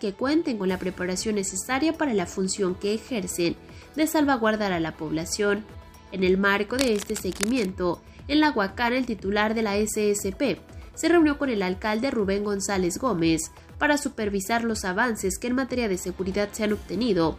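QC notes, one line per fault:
6.78 to 7.65 s, cable scratch noise: a worn cable, plug or control was likely shifted, making its contact resistance jump around erratically and inject dense, uneven noise bursts, heard as a rough scratching or rustling roughly 10 dB under the sound for nearly a second.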